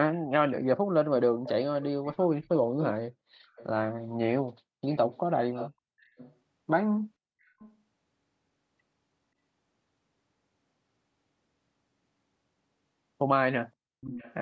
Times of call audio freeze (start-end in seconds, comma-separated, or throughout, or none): none